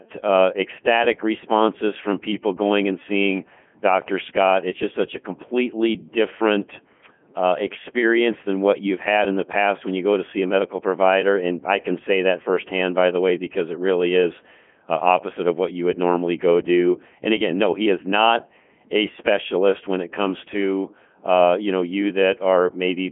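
Codec 2 vocoder damage runs through the whole of this speech clip. The voice has been rebuilt from sine waves driven by pitch, voicing and energy, so it sounds heavily robotic and buzzy. The original waveform is gone, and the smeared detail fits the codec's top 3.2 kbit/s mode. The sound is confined to a telephone-like band of about 200 Hz to 3.4 kHz, with nothing present above 3.8 kHz.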